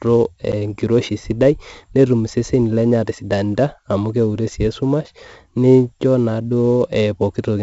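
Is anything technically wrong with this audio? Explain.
Yes, there are two faults. Throughout, 4-bit ADPCM compression adds gritty hiss that rises and falls with the speech, unlike steady background noise. Heavy damage and nothing above 7.7 kHz fit a 16 kHz, 64 kbps stream. At 0.52 s, a 10 ms block of digital silence drops the output to zeros with hard edges, heard as a click rather than a faded gap.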